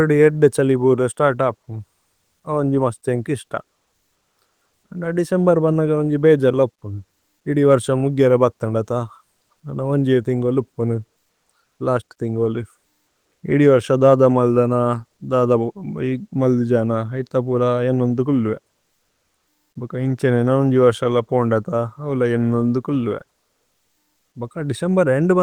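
Nothing technical goes wrong anywhere in this speech recording, so there's no fault to point to at any moment.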